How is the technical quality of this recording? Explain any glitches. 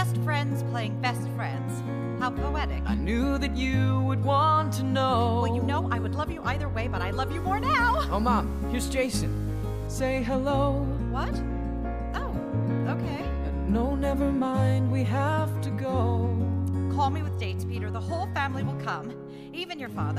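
There's one clear glitch, from 7.38 to 9.87 s, where the sound turns grainy and gritty. That's most likely low bit depth without dither: truncated to roughly 7 bits, so the error tracks the signal, quiet parts sputter, and the distortion sits about 30 dB down.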